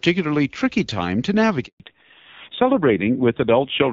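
A handover gap at 1.66 s, right after "tricky time to", cuts this speech clip to silence for 140 ms, until 1.80 s. The call was being passed from one network link to another, and no speech frames arrived while the switch happened. The sound fades out almost at once and stays dead until the new link begins carrying audio, so whatever was said in that stretch is simply missing. Fallback to narrowband follows at 1.80 s and lasts to the end. Before the gap, the light codec texture and extended treble point to AMR wideband (HD Voice) at around 12.65 kbit/s. After it, the call has dropped to an older narrowband codec, and the rougher, duller sound fits AMR-NB at about 5.9 kbit/s. Nothing above 4 kHz survives, so the crispness of sibilants and the airy top end disappear, and the low bit rate adds a gritty, buzzy edge to the voice.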